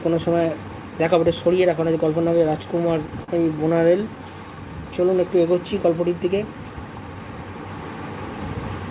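Audio heard through a narrowband call path, with nothing above 4 kHz, which points to G.711 A-law at 64 kbps. Repeated stalls (stutter) occur between 2.38 and 3.3 s: five brief gaps, the longest 40 ms, are bridged by continuing the previous sound, adding 80 ms without losing content. On a spectrogram they appear as short frozen, smeared slices. A jitter buffer slow-down follows from 3.99 to 4.95 s, where repeated pitch periods add 64 ms, so playback runs at 94% speed with unchanged pitch. The waveform shows near-identical cycles repeated, and the spectrogram shows stretched harmonics.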